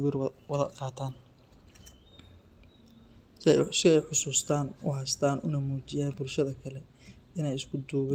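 No technical faults are audible.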